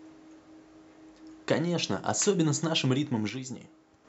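From 3.29 to 4.05 s the speech drops abruptly by about 6 dB, likely one channel dropping out; a fade would slope, not step.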